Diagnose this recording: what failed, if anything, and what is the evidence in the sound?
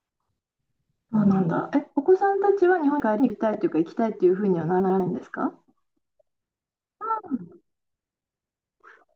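Chunks out of order at 3.0–3.3 s and 4.8–5.0 s, buffer stage: a 100 ms chunk plays late, jumbling the speech.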